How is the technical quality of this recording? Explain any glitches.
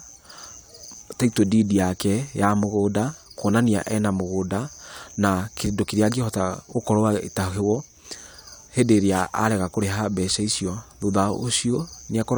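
Nothing here needs explaining, since the recording has no glitches at all.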